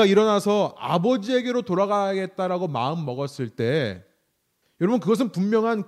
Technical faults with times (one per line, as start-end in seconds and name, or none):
none